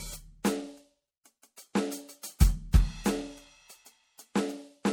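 Codec damage is plainly audible throughout the music. The likely cause is MP3 compression, fitting about 64 kbps. Nothing sounds above 19.8 kHz.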